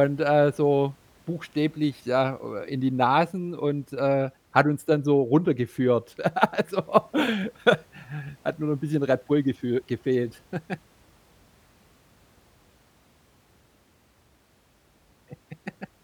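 Nothing in the recording stood out as a technical fault on listening.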